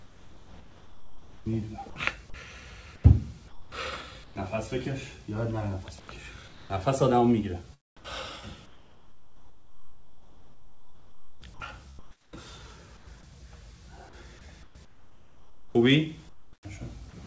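Right from the start, 0.0 to 1.96 s, the background loses its texture and turns into a flat, featureless hiss. That's comfort noise in place of the background, likely from the sender going quiet under discontinuous transmission and the receiver filling the gap with synthetic noise. It comes back at 2.96–4.36 s, 6.0–6.7 s, a long stretch from 7.97 to 13.07 s, and 14.63–16.65 s. Within those spans, between about 0.3 and 3.3 s of real background is swapped out.

Tucked into the end of that first stretch, at 1.90–1.96 s, about 50 ms of actual sound is lost and only steady noise sits in its place. That's sound dropped by the voice detector. The detector likely took that sound for background and stopped sending until it triggered again. The whole thing runs through a G.722 call path, so there's nothing above 8 kHz.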